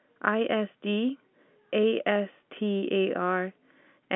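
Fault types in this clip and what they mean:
No fault types appear in this clip, so there is nothing to list.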